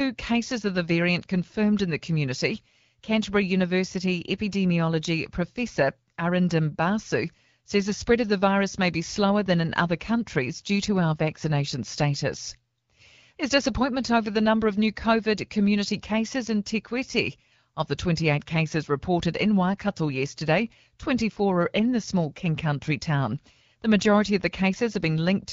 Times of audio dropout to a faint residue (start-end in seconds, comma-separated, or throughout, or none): none